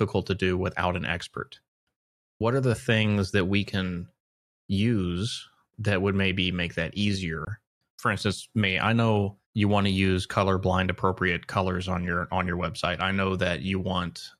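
A speech recording with one block of digital silence, from 7.45 to 7.47 s, right after "would maybe make that". For about 20 ms the signal drops straight to silence and then resumes, with no fade on either side, so the whole event comes across as a short tick-like hole in the speech. An abrupt silent block of this kind is typical of an output buffer that was not filled in time.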